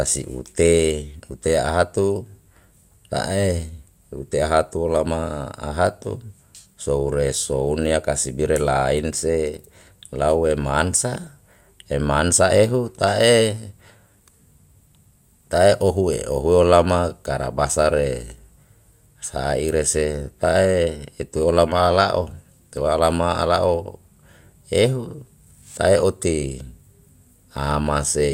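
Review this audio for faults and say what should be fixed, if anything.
There is DAB burbling in the speech from 11.15 to 11.28 s. It lasts about 130 ms. Short blips of noise sound over the speech in single sub-bands. The reception was weak. Bit errors, at a rate of a small fraction of a percent, slipped past the error correction. They corrupted the MP2 sample values. The length fits several consecutive frames being hit. A stronger signal, through a better antenna or a different position, would prevent it.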